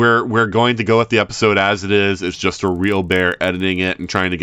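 From 2.12 s, right after "the episode as it", to the end, the resampler is restarted on every block. Each 40 ms block is converted from 16 kHz to 48 kHz on its own. The edges lack their true neighbours. This leaves a 25 Hz tick, like a buzz under the speech.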